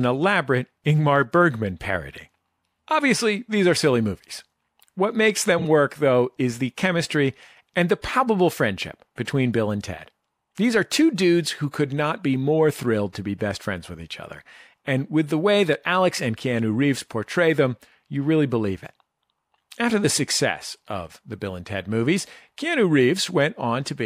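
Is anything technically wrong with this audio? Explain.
Yes. From 5.59 to 5.65 s there are frames out of order. Two adjacent blocks of about 26 ms were decoded in swapped order, so the speech plays its halves reversed. It comes out as a brief garbled flutter, and no time is lost.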